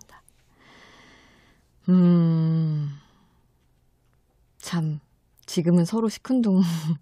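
A short speech recording with no technical faults to report. Nothing in it points to trouble at any stage of capture or playback.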